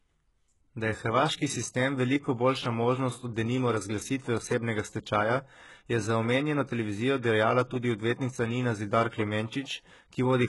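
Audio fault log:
Throughout: HE-AAC compression, likely; treble above the crossover is copied upward, so s sounds turn gritty and lispy, with a spectrogram showing smeared, repeated upper bands ending near 11.5 kHz.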